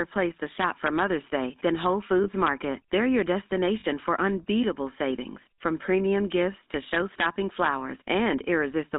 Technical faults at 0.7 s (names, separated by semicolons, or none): GSM full-rate codec; integer overflow